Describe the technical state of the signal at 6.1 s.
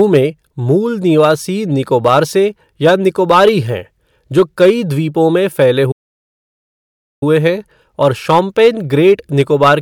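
At 6.1 s the speech has dropped into silence. It stops mid-flow at 5.91 s and resumes at 7.23 s, a gap of about 1.3 s. This is a playback stall, likely caused by the player running out of data or its thread being blocked until it could recover.

The speech around the gap has a crackly edge on its louder peaks. This is hard clipping: the signal is driven about 6 dB beyond what a stage can pass, so around one percent of samples are flattened and add high harmonics.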